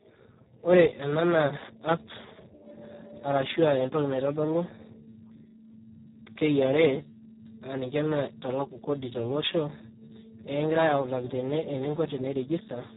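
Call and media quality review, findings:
Speex codec damage, whole clip: speech noisy, hoarse; nothing above 3.8 kHz. Probable component: Speex encoder. CELP excitation starved of bits; fits a low-quality mode around 4 kbps.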